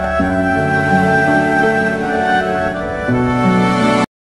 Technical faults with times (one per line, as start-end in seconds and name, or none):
none